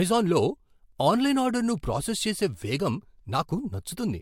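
Throughout, the speech has layered, swirly compression smear and nothing above 16.6 kHz, likely from transcoding between lossy codecs, which fits Vorbis re-encoded to MP3.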